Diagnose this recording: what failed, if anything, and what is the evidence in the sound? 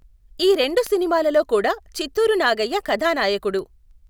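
Sharp ticks run under the speech from about 0.23 s to 4.07 s, recurring at a steady rate of roughly one every 0.15 s, about thirty in all, some louder than others. These are word clock ticks, a fault in the converter's digital input. The receiving device runs on its own clock rather than locking to the sender's, so each time the two clocks drift a sample apart, one sample is dropped or repeated. The tick rate points to a clock mismatch of around 150 ppm.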